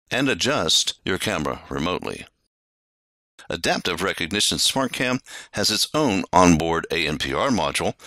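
At 6.36 s a sudden gain jump lifts the sound and its background noise together by about 9 dB, holding until 6.6 s, likely from a gain change applied instantly rather than ramped. The waveform envelope steps abruptly, and the spectrogram brightens across all frequencies at once.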